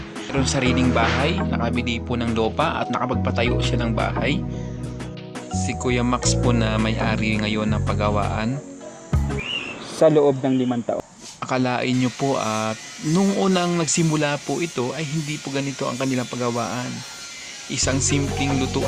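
At 0.29 to 0.31 s there is a skip ahead. Nearly half a second of sound was dropped, and playback jumps forward with no gap.

From 2.39 to 3.33 s and again from 4.11 to 5.01 s, jitter buffer speed-up trims pitch periods to cut excess delay. The sound runs about 7 to 8 percent faster at unchanged pitch.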